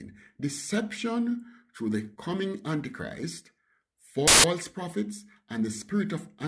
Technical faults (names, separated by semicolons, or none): file tags played as audio